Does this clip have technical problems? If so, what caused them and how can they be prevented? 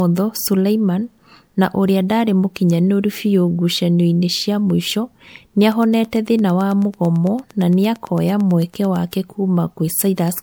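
Yes. Throughout the speech there is generation loss: a swirly, hollow smear with blurred consonant onsets, likely from about five successive MP3 encodes at 128 kbit/s. A spectrogram shows ragged holes and blotchy high frequencies. Keep a lossless master and encode only once.

From 5.72 to 8.97 s a train of clicks ticks at a steady 8.96 per second, about thirty in all, roughly as loud as the speech. They appear as evenly spaced vertical lines on a spectrogram and as similarly shaped spikes in the waveform. Shield cables from nearby equipment and check the interface's stability.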